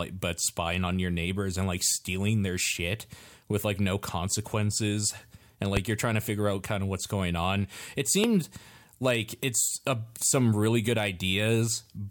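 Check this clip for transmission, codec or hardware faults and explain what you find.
Two loud pops are audible in the speech, at 5.77–5.80 s, between "like no consequences and" and "you're trying to figure", and at 8.24–8.27 s. Each is a single sharp thump roughly 20 dB above the speech, which carries on underneath. A voltage step, likely from a plug, switch, static or driver glitch, was added and shaped by downstream circuitry. On a waveform each appears as a tall isolated spike; a spectrogram shows a brief full-height vertical stripe.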